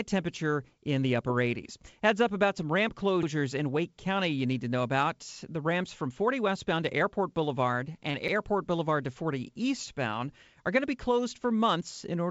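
Right after "up about some ramp", at 3.23 s, there's a stutter where 50 ms plays twice. That's overlapping chunks: the audio was handled in 5-second blocks, each starting a little before the previous one finished, so the join repeats. It happens again at 8.28 s.

Just before that second join, from 8.11 to 8.17 s, you get a short concealed packet loss. About 30 ms never reached the decoder in time, so the receiver papered over the gap by carrying the last sound forward and then blended back in, which comes across as a quick smear. The call path itself has nothing above 8 kHz, which fits a wideband codec like G.722.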